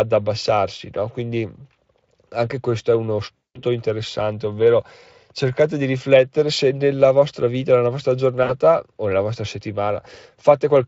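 A speech clip with VoIP packet loss concealed by the speech codec, from 3.38 to 3.63 s (about 180 ms lost) and 8.43 to 8.53 s (about 60 ms). The decoder stretches the last sound into a buzzy tone or coloured noise that fades, shown on a spectrogram as a smeared, flattened spectrum and a tapering waveform envelope.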